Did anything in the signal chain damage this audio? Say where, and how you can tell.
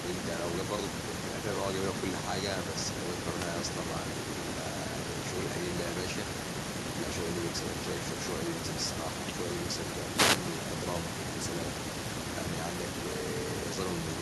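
Yes. In call processing, an echo with no canceller: the far end's loudspeaker feeds its microphone and nothing subtracts it. The whole clip carries a faint, thin copy of the speech about 26 dB down, trailing each phrase by roughly a third of a second.

In the analogue radio link, a wireless microphone noise hit: the FM signal faded as reflections cancelled, letting receiver noise surge over the speech. It sounds like a short burst of static swish from 3.35 to 3.50 s and again from 10.14 to 10.40 s.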